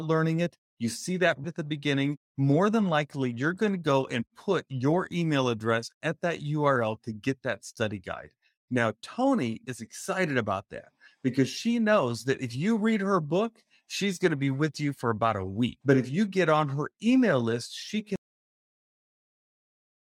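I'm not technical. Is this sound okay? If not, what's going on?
No. This is a cut-off end: right after "her email list she", at 18.16 s, the speech stops mid-sound and drops into dead silence, with no natural trailing away.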